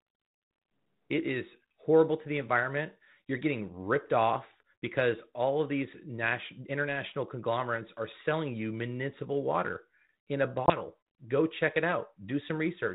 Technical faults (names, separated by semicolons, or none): packet loss on an ADPCM call